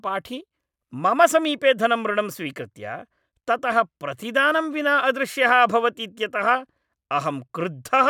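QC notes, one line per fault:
No faults detected anywhere in the speech.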